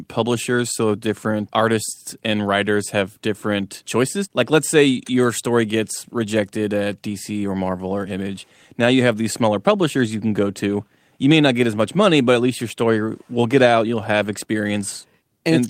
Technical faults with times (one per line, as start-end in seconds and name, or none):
none